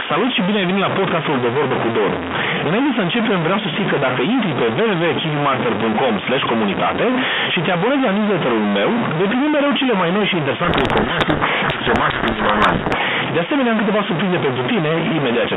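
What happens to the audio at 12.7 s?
At 12.7 s the sound sits inside a codec payload misread running from 10.64 to 13.01 s, starting just after "cele mai noi și". The receiver is reading the bits of each G.726 code word in the wrong order, so samples decode to wrong difference steps and the speech is buried under harsh, rasping distortion. Unlike a stuck bit, it arrives suddenly, covers only this span, and ends once the bit order agrees again.

A stuck bit also runs under this moment and through the whole clip. It is heard as steady grainy or buzzy distortion on the speech, with noise filling the pauses, and is likely caused by one data bit held fixed on a faulty line or converter. Its even, constant character is what sets it apart from the burst of misread frames.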